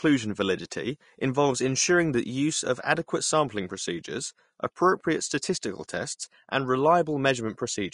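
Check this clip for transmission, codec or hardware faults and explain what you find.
One codec fault runs through the whole speech clip. Vorbis compression is the likely cause: nothing is present above 10.5 kHz, and the treble that remains sounds hissy and grainy, with roughened tones and smeared consonant attacks. The encoder drops the top band and quantises the upper residue so coarsely that fine detail turns into noise. The damage is plainly audible, which fits a low bitrate around 38 kbps.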